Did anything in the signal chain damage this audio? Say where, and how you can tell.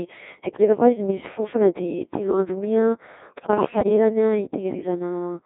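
Yes. At the codec stage, a Codec 2 vocoder throughout rebuilds the speech from sine waves, leaving it buzzy and robotic within 200 Hz to 3.7 kHz, consistent with about 1.6 kbit/s.

Bit errors on digital voice radio, from 3.28 to 3.89 s: at roughly 7 percent, corrupted parameters make the synthetic speech jump in pitch and level, breaking into warbling gibberish.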